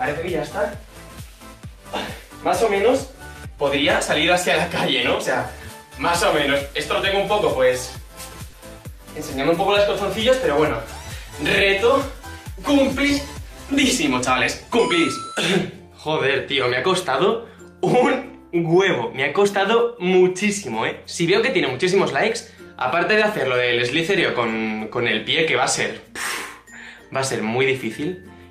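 At 8.49 to 8.55 s there is a short concealed packet loss. About 40 ms of audio arrived too late for the decoder. The receiver extended the preceding sound to fill the gap, then blended back. It is heard as a brief smear or wobble.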